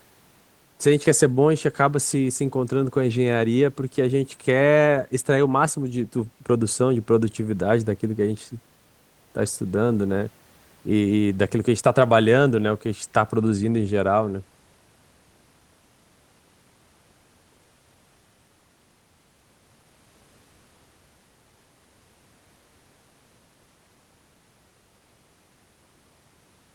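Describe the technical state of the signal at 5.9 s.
At 5.9 s the audio is intact, with no fault present.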